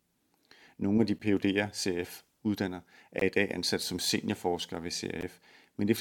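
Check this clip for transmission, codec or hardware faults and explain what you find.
There are three gaps between stream segments in this speech clip: a short one at 1.19 s, one from 3.20 to 3.22 s just before "i dag ansat som", and one at 5.21 s just after "ansat som seniorforskere ved". They recur about every 2 s, so the segments are 2 s long. Each time the next segment's timestamp lands slightly late, the player fills the difference with silence, adding 11.5, 18.7 and 14.5 ms. The result is a hard-edged hole. Unlike a dropout, nothing is missing: the speech resumes exactly where it stopped, only delayed.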